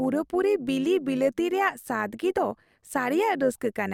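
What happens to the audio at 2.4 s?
At 2.37 s, compressed frames are skipped: about 20 ms of audio is never decoded, so the sound jumps ahead. Overlap-add ripple also runs through this moment. The level pulses by about 6 dB at roughly 100 Hz, a steady metallic buzz rather than a single isolated event.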